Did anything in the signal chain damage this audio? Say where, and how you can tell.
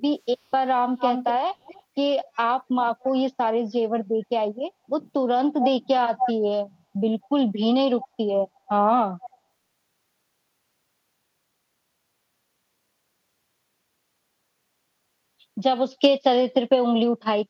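Yes, at the call-processing stage, as echo leak. A delayed copy of the speech trails it by 247 ms at 0.97–2.37 s, 3.0–3.12 s, 5.5–6.33 s, 7.22–7.29 s and 8.01–9.38 s. It is as loud as the original around 5.5 s, fairly strong near 1 s and barely audible at 7.2 s. On a spectrogram each syllable's harmonic pattern reappears 247 ms later, and the waveform shows ghost envelopes. The likely cause is a loudspeaker-side echo canceller letting residual microphone pickup back into the call.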